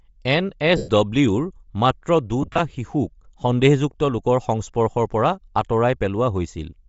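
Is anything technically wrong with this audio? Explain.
Yes. The speech carries plainly audible compression damage throughout, and there are two bursts of lost LE Audio frames.

Across the whole clip the upper band sounds grainy and breathy rather than simply dull. This is likely Bluetooth LC3 compression at a low rate, around 32 kbps, with 7.5 ms frames. The codec discards much of the top spectrum and refills it with noise. That filled-in hiss is what separates it from a plain low-pass filter.

The first burst of lost LE Audio frames runs from 0.77 to 0.90 s, between "এন এছ" and "ডব্লিউৰ মাত্ৰ". About 112 ms is missing, which fits roughly fifteen consecutive frames. The decoder repeats the last spectrum with scrambled phase and then fades it, so the gap is heard as a hissy smear sinking toward silence rather than a clean dropout or click.

The second burst, at 2.42 to 2.60 s just after "এন এছ ডব্লিউৰ মাত্ৰ", is scattered rather than continuous. 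About 98 ms is lost across 165 ms, with no single run much longer than 30 ms. The result sounds like stuttering, rough patches instead of one fade.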